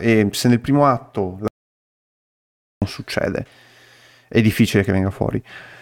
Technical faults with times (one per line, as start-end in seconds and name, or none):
1.48-2.82 audio dropout to silence